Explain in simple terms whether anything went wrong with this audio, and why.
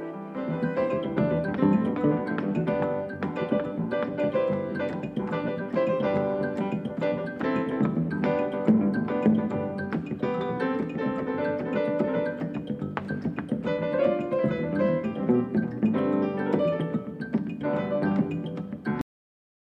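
Right at the end, at about 19.01 s, the sound stops dead in the middle of itself and the last fraction of a second is pure silence. It doesn't fade or trail away. This is a cut-off end: the final chunks of audio were never saved or played out, so the recording ends abruptly instead of letting the sound finish naturally, and what should have been there is simply missing.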